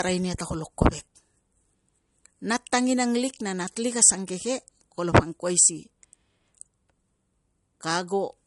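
From start to finish the speech has nothing above 11.1 kHz, plus the smeared, swirly artefacts of a heavy MP3 encode, most likely low-bitrate audio saved at a high bitrate. A 48 kbit/s original re-encoded at 256 kbit/s would fit. Unlike a plain low-pass filter, the codec artefacts remain despite the large file.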